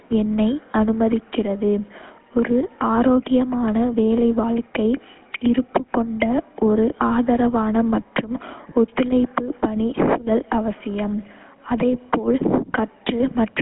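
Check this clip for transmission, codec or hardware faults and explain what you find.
One fault runs through the whole recording: GSM full-rate codec coding. Throughout, the speech has been squeezed through the original GSM vocal-tract model, whose pulse-train excitation keeps only part of the detail, which fits a 13 kbps stream. The band is cut to roughly 200 Hz to 3.4 kHz, and the codec damage is plainly audible as a buzzy, gravelly roughness over a thin, muffled voice.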